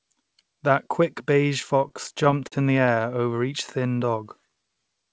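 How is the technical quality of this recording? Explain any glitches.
The recording has two timing faults from late network delivery, both in the jitter buffer. The call path passes nothing above 8 kHz, which fits a wideband codec such as G.722.

From 1.80 to 3.14 s there are repeated stalls (stutter). Packets arrived late, so the jitter buffer ran empty 14 times, and the receiver stretched the last sound to cover each gap, the longest about 47 ms. About 180 ms is filled in this way, with nothing lost, so the speech drags and hiccups.

From 3.83 to 4.87 s there is a jitter buffer slow-down. The buffer was rebuilding its reserve by repeating single pitch periods and bits of pauses, which adds 134 ms. The speech plays at about 88% speed with its pitch unchanged, so sounds come out drawn out.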